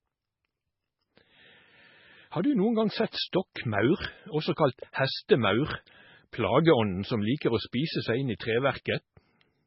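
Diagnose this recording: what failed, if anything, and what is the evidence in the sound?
Codec stage: likely heavy MP3 compression at a very low bitrate, around 16 kbps. Throughout, the speech has nothing above 5.5 kHz and sounds watery and swirly.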